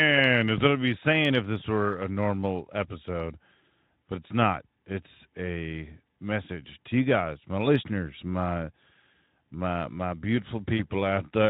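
Speech clip with three short hiccups that sound like VoIP packet loss concealed by the speech codec: at 1.59 to 1.63 s right after "I'd be saying if", at 4.03 to 4.05 s just before "but it's not", and at 10.77 to 10.84 s. Each time the decoder stretches its last bit of sound into a brief smear, which fits a single lost 20 ms frame, under the light coloring of the Speex codec.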